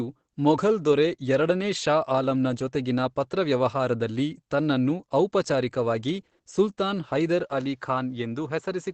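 Speech throughout, and the whole thing carries the muffled, hoarse character of heavy Opus compression. There's no real air on top. That's the sound of the codec dropping into its SILK speech mode, which it does when it's starved for bits. The band here is wideband, and the damage fits something around 12 kbps, so this is most likely a low-rate Opus encode rather than a bad mic. Then at 7.44 s, running to the end, the input appears to switch to a poorer device. There's no gap and no real jump in level, but the top end closes in, with nothing left above about 7.6 kHz. A faint new noise floor also slides in well below the speech. The change happens mid-recording with the tone changing abruptly, so the likely cause is the system swapping inputs, to another mic or to a headset's call profile.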